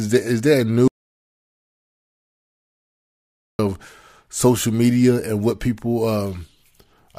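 The input was likely lost while recording continued, causing an audio dropout to silence: after "is there a" at 0.88 s, speech cuts to dead silence until 3.59 s.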